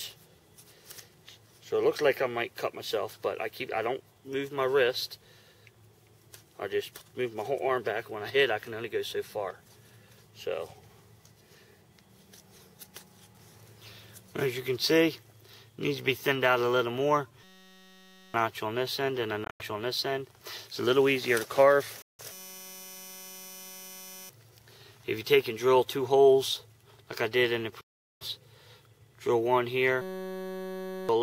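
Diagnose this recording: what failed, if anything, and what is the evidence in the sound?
System hang loop at 17.44–18.34 s, 22.32–24.29 s and 30.02–31.09 s, a driver/buffer failure: a steady 188 Hz buzz as one 5.33 ms slice repeats, which fits a 256-sample ring buffer cycling while the system froze. Roughly one, two and one second of audio go missing.

Bluetooth dropout, likely the cause of the silences at 19.44–19.65 s, 22.02–22.21 s and 27.81–28.26 s, a wireless-link stage fault. About 122 ms, 168 ms and 396 ms vanish, the first in broken patches, and the sound resumes further along, as late packets were discarded.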